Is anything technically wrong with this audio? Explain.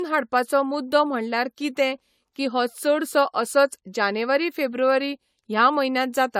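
Yes. Throughout the whole speech clip there is generation loss. The signal sounds swirly, smeared and hollow, with consonant attacks blurred and nothing above 18.8 kHz. This most likely comes from repeated lossy coding. The character points to AAC-LC at around 96 kbit/s, applied about four times over. Each decode and re-encode quantises again on a shifted frame grid, so noise accumulates beyond what a single pass at that bitrate would leave.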